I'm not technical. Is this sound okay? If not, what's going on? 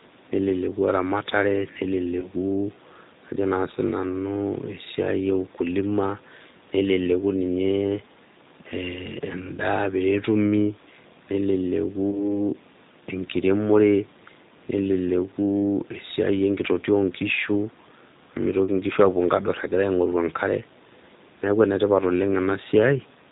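No. The whole recording has passed through the G.729 codec, a phone-call compression scheme that rebuilds the voice from a simplified model. That is why it sounds slightly rough, synthetic and muffled throughout, with nothing bright above about 4 kHz.

There are also four brief moments of VoIP packet loss concealed by the speech codec, at 2.20–2.28, 9.56–9.60, 12.11–12.28 and 18.65–18.69 seconds. Each one fits a single small piece of the call going missing. Instead of a silent gap, the system guessed by stretching the last sound, so you hear a short buzzy or noisy smear that fades before the voice fully recovers.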